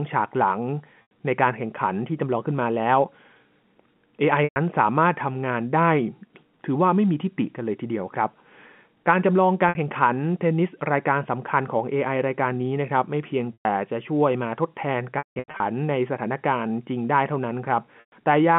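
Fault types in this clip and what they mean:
Packet loss with pitch repetition: the receiver papers over each lost stretch by looping the last pitch period, so the 60 to 120 ms gaps sound like brief buzzy held bits, and the scattered patch at 15.18 to 15.6 s, with a 180 ms run, fades out before cross-fading back.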